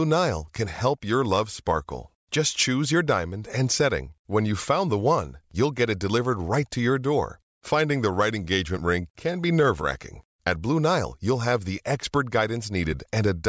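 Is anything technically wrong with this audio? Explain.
No, nothing in this speech recording stood out as technically wrong on listening.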